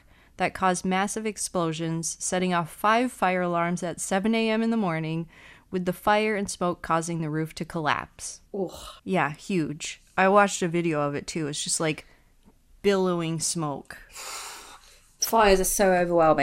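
DAB burbling appears at 2.40 s and again from 15.22 to 15.30 s. Weak reception lets bit errors slip past error correction into the MP2 data. Corrupted samples put short noise blips in individual sub-bands, and corrupted scale factors make sub-bands jump in level for up to a frame, giving brief blips of noise over the speech.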